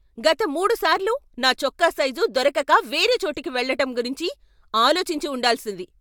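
No technical faults are audible anywhere in the speech.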